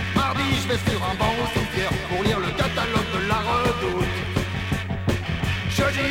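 No technical faults can be heard anywhere in the audio; the signal stays stable and intact throughout.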